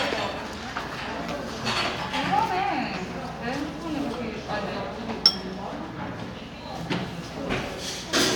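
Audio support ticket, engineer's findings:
No faults found on listening. Nothing to escalate; ticket can close.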